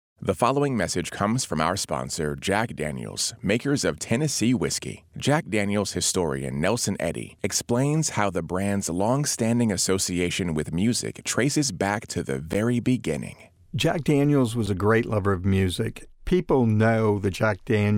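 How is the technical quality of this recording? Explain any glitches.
The recording has two dropouts, both a block of digital silence, in the speech.

At 12.53 s, just after "traces back to the", the program likely failed to fill its output buffer in time, so about 11.6 ms of samples became zeros. The length fits a 512-sample buffer. The abrupt cut to silence and back is heard as a tick or dip.

At 14.66 s, just before "a great lover of", about 5.8 ms was zeroed, which points to a 256-sample buffer and likely the same kind of underrun. This gap is shorter, so it is heard mostly as a single click.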